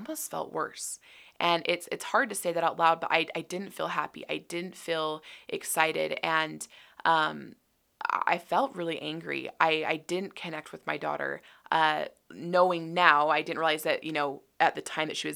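No technical faults can be heard in this speech recording.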